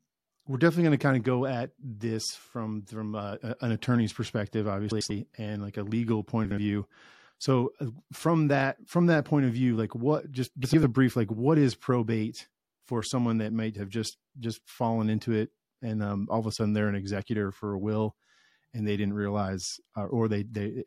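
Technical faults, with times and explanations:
4.91–5.11 s, 6.45–6.58 s, 10.64–10.84 s, frames out of order: adjacent blocks of 96, 64 and 96 ms play swapped, giving a garbled flutter. The waveform shows abrupt discontinuities and the spectrogram shows mismatched segments, with no time lost.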